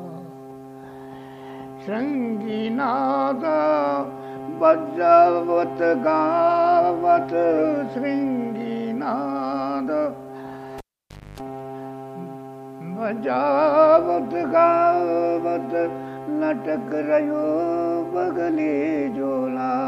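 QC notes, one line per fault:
10.78–11.40 s, cable pulled and plugged in: a live connector is withdrawn and reinserted. A pop marks the break, then the signal drops to near silence for about 0.57 s while the circuit is open. On reinsertion the tip touches first, and its unshielded contact picks up about 0.27 s of 50 Hz mains buzz. A second pop follows as the sleeve seats and the sound returns.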